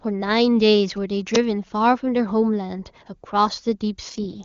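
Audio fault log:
0.88–1.93 s, GSM signalling bursts: a nearby 2G phone transmitting short groups of radio bursts, rectified by the audio circuit into a galloping dit-dit-dit of buzzes repeating at about 217 Hz, sitting roughly 30 dB below the speech.
1.35 s, uninitialised buffer: a 10 ms block was played out before any audio had been written into it, so stale memory contents came through as samples, producing a brief, loud crack.
4.09–4.45 s, AMR rate drop: the wideband link falls from 23.85 to 6.6 kbit/s as protection against a weak radio link takes over the bits, so the speech keeps its bandwidth without a gap but turns rough, raspy and synthetic to the end.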